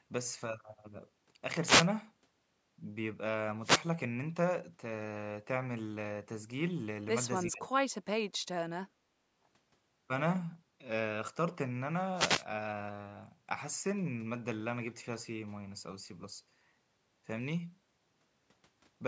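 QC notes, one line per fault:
7.46–7.73 s, speech suppressed in double talk: the speech dips sharply, by about 25 dB at its deepest, for roughly 0.3 s. This is likely an echo canceller mistaking local speech for loudspeaker echo during overlap and attenuating it.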